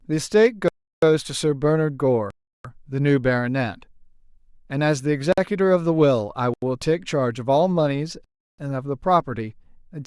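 Five blocks of digital silence hit the speech at 0.68–1.02 s, 2.30–2.65 s, 5.33–5.38 s, 6.54–6.62 s and 8.24–8.59 s. The output buffer likely wasn't filled in time, so the audio drops hard to silence. The three 341 ms holes fit an 8192-sample buffer.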